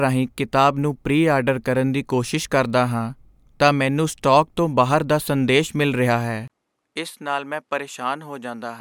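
At 6.48 s there is a 20 ms gap, then duller, quieter speech, likely an input switched to a poorer device. The spectrogram goes empty above 13 kHz and the waveform shrinks.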